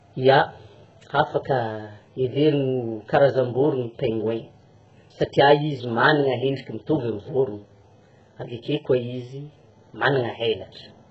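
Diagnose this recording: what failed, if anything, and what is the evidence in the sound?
HE-AAC compression, heard throughout, is the likely culprit at the codec stage. Nothing reaches above 10.5 kHz, and the upper band has a synthetic quality, with sibilants sounding gritty and metallic. The coder kept only the lower spectrum and rebuilt the treble by copying lower bands upward under a coarse envelope, so the harmonics fail to align across the crossover. The heavy damage fits a very low bitrate of around 8 kbps.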